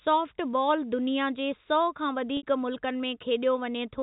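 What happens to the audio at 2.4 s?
At 2.37 s the speech breaks up for about 60 ms, until 2.43 s. This is packet loss with pitch repetition. The gap fits two lost 30 ms packets. To bridge it, the receiver repeats the last pitch period it received. That repetition fades out over about 50 ms. You hear a brief held, buzzy tone that dies away. The speech then returns through a short cross-fade, still band-limited by the G.711 telephone coding.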